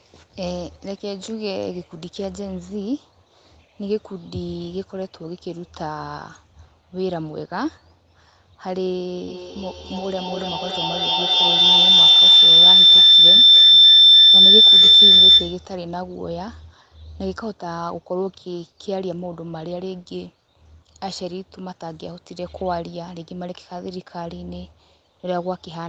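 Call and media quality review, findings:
Feedback howl, 9.28 to 15.76 s. Probable component: two call endpoints sharing one room, loudspeaker audio re-entering a microphone with loop gain above unity. Each pass louder, so the repeats narrow to a tone around 4 kHz, repeating roughly every 300 ms, peaking about 16 dB above speech, sustained until the loop breaks at 15.76 s.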